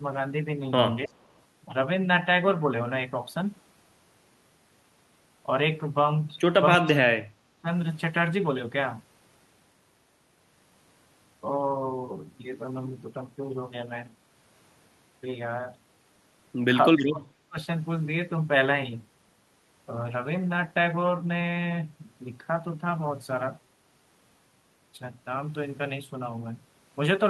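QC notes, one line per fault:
1.06–1.16 s, 6.78–7.67 s and 16.96–17.58 s: speech suppressed in double talk. The speech dips sharply three times. The first dip is brief, about a tenth of a second and about 20 dB down. The later two last roughly 0.7 s each and go much deeper, about 40 dB and about 35 dB. The likely cause is the far side talking at the same moment. The echo canceller could not tell this talker apart from its own loudspeaker echo, so it turned everything down.
1.08–1.33 s: echo leak. A delayed copy of the speech comes back about 315 ms late. It is very faint, roughly 40 dB below the direct speech, and heard only as a short scrap. This likely comes from a far end on a loudspeaker whose echo canceller left some of its microphone pickup in place. It overlaps the first dip.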